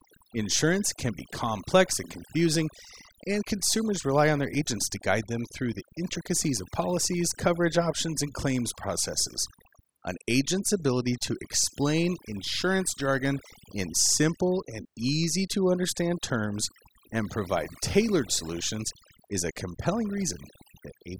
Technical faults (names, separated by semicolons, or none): overdone noise removal